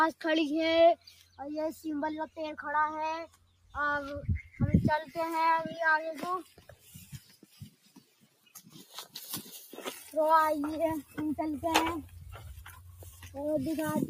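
Noise suppressor applied to music or sounds, throughout: a speech-oriented suppressor treats sustained tones and ambience as noise, so gain swings by roughly 15 dB. Attacks pass while held material and tails sink, leaving the sound pumping and thinned.

Sound cut by the noise suppressor at 0.96–1.4 s, 3.27–3.76 s, 4.43–4.58 s, 6.43–9.15 s, 9.44–9.76 s, 9.97–10.14 s, 12.63–12.78 s and 12.97–13.29 s: steady passages drop by about 6 to 17 dB. The deepest dip is at 3.27 s, and the longest fades across 6.43–9.15 s.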